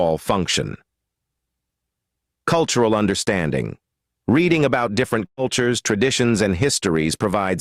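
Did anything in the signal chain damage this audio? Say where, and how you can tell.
Yes, at the network stage. A burst of packet loss hits from 5.25 to 5.39 s. About 120 ms of audio never arrives. The receiver covers the gap by extending the last sound it had, for about 118 ms, and turns that copy down as the gap goes on. The result is a brief held, fading tail that decays toward silence. The audio then picks up further along, with the missing stretch simply skipped.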